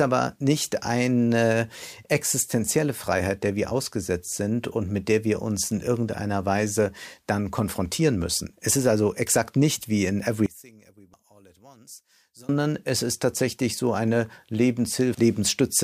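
From 10.46 to 12.49 s the speech drops by about 26 dB and turns faint, with its centre largely gone. The likely cause is one channel inverted, so the shared centred signal cancels when the two channels are summed to mono.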